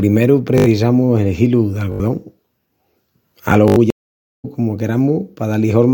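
At 0.58, 1.92 and 3.68 s the speech breaks into a rapid stutter lasting about 0.08 s, a short fragment hammered out several times with a hard join at each restart, giving a brief buzzy rattle. This is a repeated buffer: fresh audio did not reach the output in time, so the last 20 ms block was played four extra times, and the speech jumps past a short stretch, roughly 70 ms, when it resumes.

From 3.90 to 4.45 s the speech drops out completely for about 536 ms, then comes back already further along, as though roughly half a second had been skipped rather than paused. That is a stream reconnect: the connection failed, the player went silent while it re-established the link, and a new decoder picked up the live stream at its current position instead of where playback had stopped.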